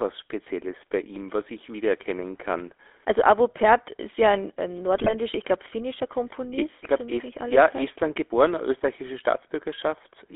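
The whole speech clip carries the GSM full-rate codec: band-limited to about 300 Hz to 3.5 kHz, with that pulse-driven vocal-tract model giving a buzzy, gravelly edge typical of 13 kbps GSM. Then from 4.96 to 5.13 s, right after "ist ja ein ähm" and before "ich glaube finnischer", GSM bit errors corrupt the decoder's parameters, so the voice briefly squawks and gargles.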